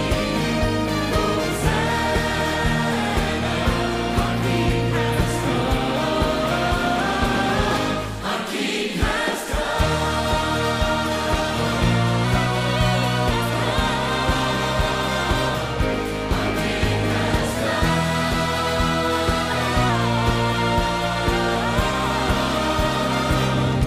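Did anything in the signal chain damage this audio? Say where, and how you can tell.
Yes. From 12.24 to 13.31 s and from 17.55 to 19.90 s, the sound runs 5.5% fast and 93 cents sharp, then snaps back. This is a drift correction step, likely from clock-matching buffer software. Unlike wow, it is one fixed jump, not a wavering pitch.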